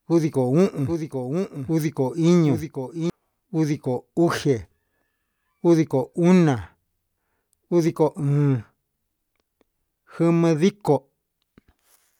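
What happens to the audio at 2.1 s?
At 2.1 s the speech is caught in a doubled audio track, running from 0.86 s to 3.10 s. A second full-band copy trails the original by roughly 0.7 s at about 5 dB lower, likely from the signal being captured again through a slower path or two out-of-step copies held in an edit. The echo has no decay or room colour, so it sounds like a dry overlapping repeat, and it starts and stops abruptly.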